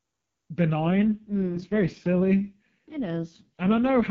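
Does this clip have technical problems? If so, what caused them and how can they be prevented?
Yes. At about 0.80 s the speech suddenly turns rough and synthetic and stays that way to 4.10 s. That's an AMR rate drop: the link weakened, so the network pushed the AMR-WB (HD Voice) codec down from its clean top mode. The graininess fits a drop from about 23.85 kbit/s to 6.6 kbit/s, with the freed bits spent on error protection. The band doesn't narrow and there's no gap. To prevent it, improve radio coverage or signal strength so the link never has to fall back to low rates.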